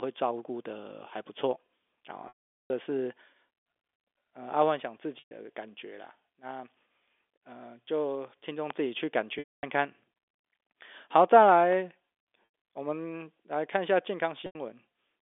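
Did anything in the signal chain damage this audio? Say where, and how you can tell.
Yes. At the network stage there is packet loss with pitch repetition. Each gap is bridged by a held, slightly buzzy tone that repeats the last pitch period. The short losses are at 5.19 to 5.31 s (120 ms), 12.46 s and 14.46 to 14.55 s (90 ms each). Longer ones at 2.28 to 2.70 s (420 ms) and 9.39 to 9.63 s (240 ms) fade to silence over about 50 ms, then the sound returns through a brief cross-fade. The gap lengths fit 30 ms packets being dropped and concealed at the receiver.

Separately, loud pops stand about 10 dB above the sound: a single sharp pop at 8.70 s, and a pair between 11.49 and 11.75 s. The sound continues underneath each one, so nothing was cut or replaced. Something was added on top. That points to the analogue side, with the likely cause a voltage step or pulse from a plug, switch or static discharge, shaped and briefly rung by the circuits that followed.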